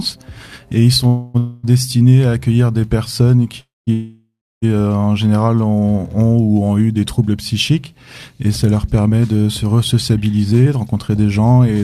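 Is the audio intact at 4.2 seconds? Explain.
No. A call audio freeze runs from 3.93 to 4.64 s, likely from delayed packets draining the jitter buffer. The last sound is stretched into a fading buzz, then about 0.31 s of silence, before the audio resumes where it stopped, about 0.69 s late.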